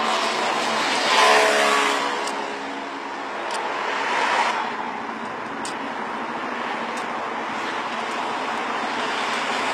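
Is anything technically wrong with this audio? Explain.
Yes. Throughout, the treble sounds bright yet gritty and metallic, with high detail not quite matching the body beneath it. This is likely HE-AAC compression at a very low bitrate, around 20 kbps, rebuilding the top end by copying lower bands upward rather than coding it.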